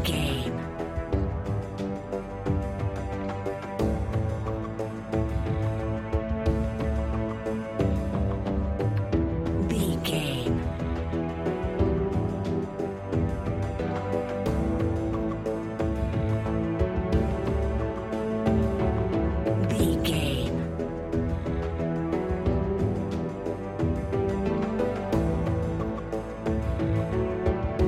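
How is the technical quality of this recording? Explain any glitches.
No technical glitches are audible anywhere in the recording, and the signal holds steady throughout with nothing interrupting or degrading it.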